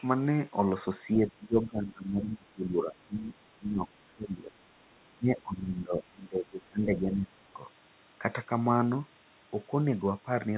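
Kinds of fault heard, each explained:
Speech suppressed in double talk: from 1.15 to 4.57 s and again from 5.18 to 7.56 s, the speech sinks and breaks up in pieces. It drops by about 20 dB at its deepest in the first stretch and about 15 dB in the second. The likely cause is an echo canceller that, with both ends talking at once, could not tell the near talker from its own loudspeaker echo and turned both down together.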